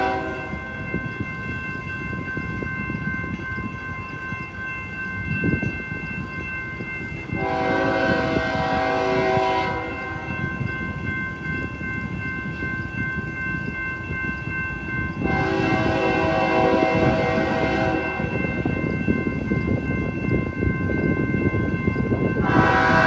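No technical faults are audible.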